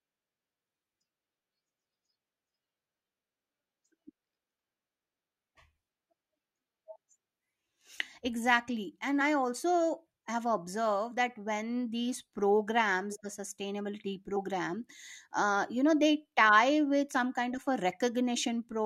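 Compressed frames skipped at 9.20 s, 14.35 s and 17.12 s: at each point whole blocks of the encoded audio never reach the output, either lost from the file or rejected by the decoder as corrupt. The speech leaps forward by roughly 50 ms, 70 ms and 50 ms, jumps that fit two or three frames of 23.2 ms. Because adjacent frames overlap, each join is heard as a short smeared blip, not a sharp click.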